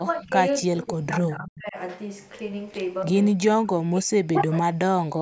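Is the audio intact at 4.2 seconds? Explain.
No, 4.2 s falls in a stretch from 3.34 to 5.17 s where the speech dips hard, likely speech suppressed in double talk by an echo canceller.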